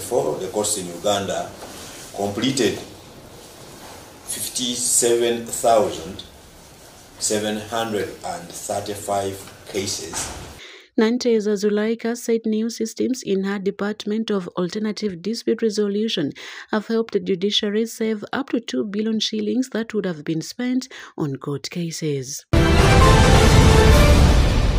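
Nothing is technically wrong with this audio.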